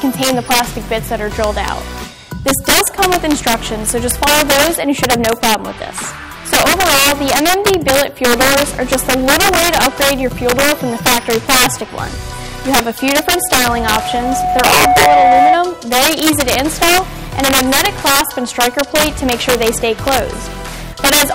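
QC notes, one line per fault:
Throughout: integer overflow. The signal is driven about 10 dB past full scale, and instead of being held at the limit the loudest peaks wrap around to the opposite sign. A small share of samples, around three percent, are affected. The result is violent, sharp cracks on loud moments, harsher and more abrupt than the flattened buzz of ordinary clipping.
13.12 to 15.59 s: loudspeaker feedback squeal. A single 734 Hz tone rises on its own over roughly two seconds until it sits about 5 dB above the program. This is a microphone hearing its own loudspeaker with the loop gain above one at that frequency. It differs from a steady hum or test tone because it swells and feeds on itself.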